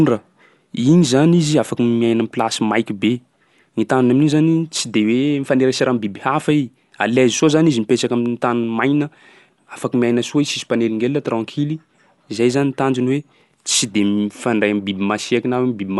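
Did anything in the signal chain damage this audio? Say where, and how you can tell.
Yes, codec stage: throughout, nothing above 11.4 kHz and rough, fluttering dither noise, likely Dolby Digital compression at about 64 kbps, unlike a clean low-pass filter.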